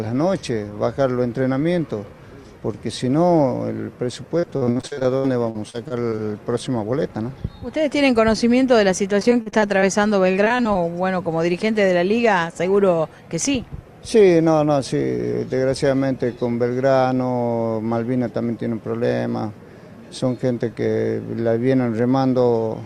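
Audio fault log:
4.39–6.20 s, 9.20–9.84 s and 10.44–10.85 s, repeated packet loss (robotic sound): holes of up to 60 ms keep opening, each patched by stretching the preceding sound, covering roughly a fifth to over a quarter of each stretch, so the audio turns choppy, with pieces missing.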